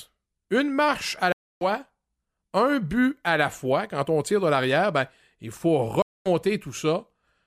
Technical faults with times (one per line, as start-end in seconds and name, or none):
1.32-1.65 stream reconnect
6.02-6.28 stream reconnect